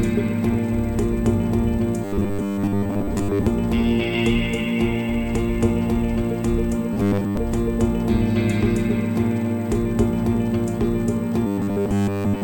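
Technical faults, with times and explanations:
2.05–3.47 s, 6.93–7.37 s and 11.47–12.43 s: robotic sound from repeated short buffers. New audio was likely arriving too seldom, so the playback path kept refilling the gap by looping a fragment of about 10 ms, with most of the stretch made of these repeats instead of fresh audio. Looping at that interval stamps a fixed 100 Hz buzz onto the sound, giving a rigid, metallic tone that tracks the original only loosely.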